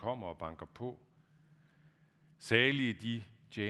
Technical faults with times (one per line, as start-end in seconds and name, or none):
none